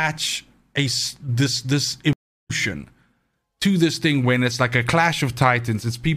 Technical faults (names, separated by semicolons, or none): stream reconnect